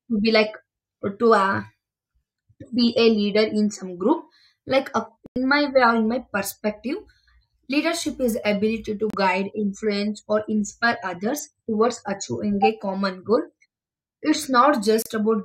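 At 5.26 s the speech drops to silence for about 0.1 s, then twice more for shorter gaps near 9.1 s and 15.02 s, each around 32 ms. These are digital broadcast dropouts. The receiver muted when incoming frames failed, and the first hole fits roughly three lost frames. Unlike packet-loss concealment, nothing is smeared or repeated to fill the gap. The sound simply stops and resumes later, with the missing material gone.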